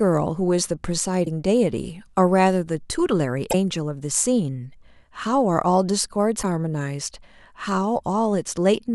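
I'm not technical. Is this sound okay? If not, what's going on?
No. The speech has three short glitches, at about 1.22 to 1.27 s, 3.49 to 3.55 s and 6.39 to 6.44 s, each lasting roughly a twentieth of a second. They are damaged data in a compressed stream. Part of the compressed file was corrupted, so the player briefly misread that stretch and had to hunt for a clean starting point again. What you hear is a quick chirp or blip breaking into the speech.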